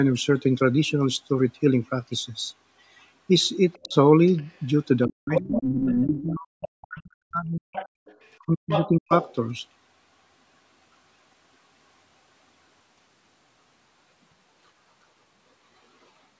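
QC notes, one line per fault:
3.73–4.66 s, 5.32–6.67 s and 7.72–9.35 s, other side's voice leaking through: a second voice sits under the speech, faint in the first stretch, then only around 10 dB below the talker in the later two. This is likely loudspeaker echo the canceller failed to remove.
3.77–3.95 s, 5.08–7.66 s and 8.45–9.11 s, speech suppressed in double talk: the talker's voice sinks by roughly 35 to 40 dB, briefly at first and then for nearly three seconds. This is likely the canceller turning everything down while both sides spoke at once.
7.94–8.05 s, background gated by the echo canceller: the room sound drops out for about a tenth of a second, falling by about 37 dB before returning. The canceller clamped the microphone hard while the loudspeaker played, then released it.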